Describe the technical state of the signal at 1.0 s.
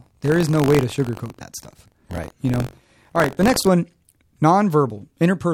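At 1.0 s the write and read positions of the audio ring buffer have slipped and cross within every period, so this point sits inside a stretch of buffer tearing that runs from the start to 3.68 s. In each buffer, a small slice of roughly 4 percent holds speech from about 40 ms earlier, hard-joined on both sides. The result is a rattling, robotic buzz at about 46.9 Hz, which fits a 1024-sample buffer, present wherever speech is.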